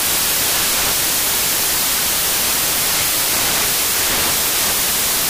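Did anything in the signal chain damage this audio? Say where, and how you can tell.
Yes: the sample-format conversion stage has produced samples built from the wrong bytes for the whole clip. Reading bytes misaligned or in swapped order turns the fast-changing low bits into each value's main part, so loud, harsh broadband noise replaces the sound, filling the spectrogram evenly and the waveform solidly.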